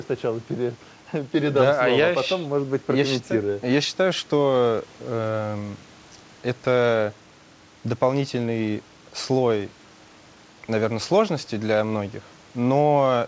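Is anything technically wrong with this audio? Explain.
No, nothing in this speech stood out as a problem on listening, and the band stopping around 8 kHz is what the G.722 call path it came through would normally give.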